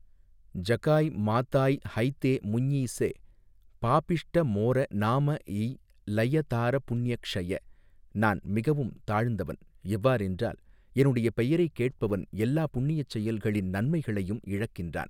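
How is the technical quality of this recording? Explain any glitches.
No glitches or technical faults can be heard anywhere in the recording.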